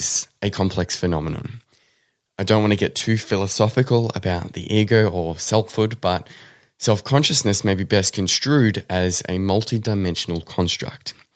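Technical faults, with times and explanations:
No technical faults are present in this speech.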